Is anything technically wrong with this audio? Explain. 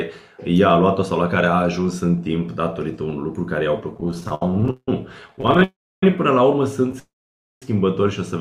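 Yes. The audio has two bursts of repeated stalls (stutter) and two call audio freezes, all typical of packet delivery problems on a real-time link.

Repeated stalls (stutter), 3.94 to 4.89 s and 5.28 to 5.62 s: packets arrived late or slower than playback, so the jitter buffer kept draining and the receiver extended the last sound to fill each hole. The first burst has 17 stalls adding about 404 ms, the longest 172 ms, concealing about 43 percent of that span. The second has 11 short stalls, none over 15 ms, adding 112 ms, about a third of the span. Nothing is lost, but the sound drags and judders.

Call audio freeze, 5.64 to 6.03 s and 6.99 to 7.63 s: playback halts, the last sound is briefly held and fades, then silence follows before the audio resumes where it stopped. The first freeze inserts 387 ms, about 300 ms of it silent. The second inserts 623 ms, about 540 ms silent. The likely cause is packets held up in transit long enough to empty the jitter buffer. 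Each freeze delays everything after it instead of dropping material.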